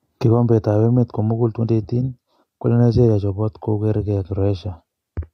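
A short speech recording with no audible technical faults anywhere in the signal.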